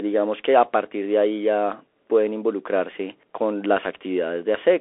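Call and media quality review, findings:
Bluetooth CVSD headset codec, whole clip. Narrowband one-bit delta link, fitting a 64 kbps CVSD stream. Speech confined to 300 Hz to 3.4 kHz, nothing above 3.8 kHz; scratchy s sounds, granular hiss underneath, loud peaks outrunning the adaptive step.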